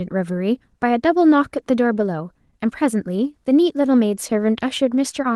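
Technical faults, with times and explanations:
Nothing here stands out as a technical fault, just speech coming through the Opus voice coding at about 20 kbps with the full band kept.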